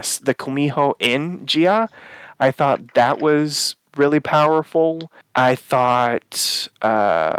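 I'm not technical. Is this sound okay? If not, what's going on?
No. There is clock drift between sender and receiver: the sending device's clock runs roughly 4 percent fast, so the speech arrives slightly faster than the receiver plays it. Unlike packet loss, nothing goes silent or garbled.

To keep up, the receiver makes repeated timing corrections from 0.29 to 7.32 s, trimming tiny slices at uneven intervals. This gives faint hiccups and a slightly unsteady pace rather than clean, regular skips.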